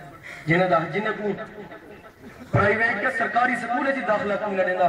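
From 1.16 s to the end of the clip, a call bitrate drop occurs. The link's bandwidth estimate collapses, and the encoder is told to spend far fewer bits. The change in quality fits a fall from around 96 kbps to roughly 14 kbps, held at its lowest for about 1.2 s. Coding at that rate is much coarser, and the upper frequencies are trimmed away. The sound turns muffled and rough, with a watery smear, and it doesn't recover before the clip ends.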